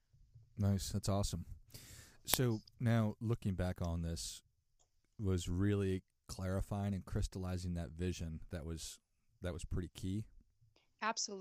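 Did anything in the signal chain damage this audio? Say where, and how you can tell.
Yes. There's an uninitialised buffer fault at the driver/buffer stage, around 2.34 s, right before "now looking back on". You get a very short, loud crack lasting about 1.45 ms, which fits a 64-sample block at 44.1 kHz. What happened is that the playback path grabbed that block before any audio had been written into it, so whatever junk was sitting in memory went straight out as samples.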